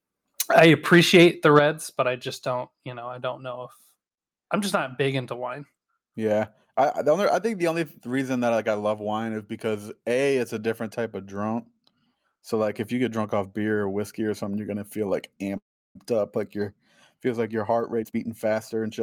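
Right at the start, from 0.57 to 1.25 s, there's microphone overload: the input was likely set too hot, so peaks run into the converter's ceiling by about 6 dB and get their tops sheared off. Roughly 2% of samples in that stretch are flattened, which puts a crackly, distorted edge on the loudest moments. A second, shorter hit follows at 1.56 to 1.59 s, about 2 dB over, with around 3% of samples clipped.

Straight after that second overload, at 1.59 s, the microphone volume is stepped down by about 7 dB in one go. Voice and background both drop together, which is the giveaway that the input gain itself changed rather than the talker backing off. This is most likely the call software reacting to the clipping it just saw and turning the device input down.

From 15.57 to 15.97 s there's a call audio freeze. The jitter buffer likely ran dry while packets were held up, so the receiver stretched the last bit of sound for a moment before it faded out, leaving about 340 ms of silence inside a 378 ms gap. 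Nothing is actually lost. The audio picks up where it stopped, so everything after this point sits about 378 ms later than it should.

The clip ends with a jitter buffer speed-up from 17.69 to 19.01 s. Having built up extra delay, the receiver trims it back by repeatedly cutting out short pitch-period chunks, about 300 ms in total. Playback runs at around 120% speed with the pitch unchanged, so the speech sounds noticeably hurried over that last stretch.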